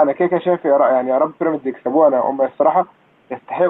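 No technical fault can be heard in the speech. A faint room background sits about 38 dB below the voice, and the call path's coding stops the high frequencies at 8 kHz, which fits a wideband Opus call.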